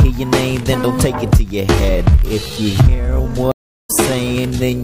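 From 1.57 s to the end, the pace suddenly drops to about 0.6 times normal while the pitch holds steady. This is a time-stretched section, likely from software lengthening the audio by repeating short pieces, which keeps the pitch rather than giving the deeper tone a plain slowdown would.

At 3.52 s a stream reconnect cuts in: about 0.32 s of silence, then the audio resumes at around 3.90 s roughly a fifth of a second further along. Unlike a simple dropout, material is skipped, because a fresh decoder picked up the stream at a later point.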